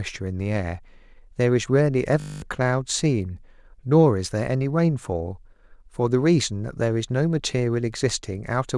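At 2.2 s the playback system hangs: the computer or audio driver stops supplying new data, while the sound hardware keeps replaying the same short stretch of its ring buffer. This system hang loop repeats a 20 ms slice of speech, consistent with a buffer of about that length, so it cycles 50 times a second and comes across as a steady 50 Hz buzz until 2.42 s. About a fifth of a second of real audio is lost underneath it.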